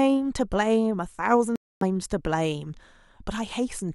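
Packets on the wireless link likely failed to reach the headphones in time and were thrown away, a Bluetooth dropout. From 1.56 s to 1.83 s the speech cuts to silence, a gap of about 255 ms. The playback does not wait for the missing stretch. When good packets arrive again, the speech picks up further along, as though it had kept running through the hole.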